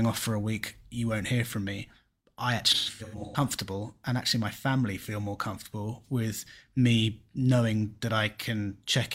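Speech with AAC frame loss and concealment. From 2.74 to 3.40 s, scattered dropouts total about 0.43 s, longest roughly 150 ms, and sound smeared and phasey. At 7.91 s, a 43 ms loss leaves a brief noisy patch.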